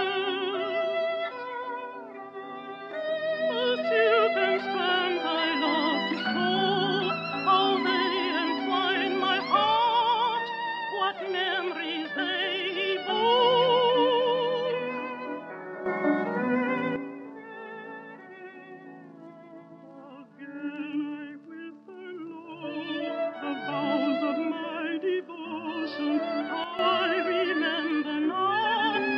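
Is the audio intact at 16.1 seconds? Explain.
No. A sudden gain jump from 15.86 to 16.96 s lifts sound and background noise together by about 9 dB, likely an unramped digital gain change, showing as an abrupt step in waveform amplitude.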